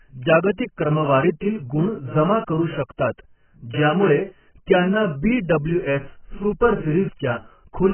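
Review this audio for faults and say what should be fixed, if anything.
Heavy AAC compression throughout, likely from an AAC-LC encode at a very low bitrate of around 9 kbps: the encoder discards everything above 3.1 kHz and starves the remaining bands, so the speech sounds dull and smeared, with warbling, fizzy sibilants. Encode speech at a substantially higher bitrate, or keep an uncompressed master.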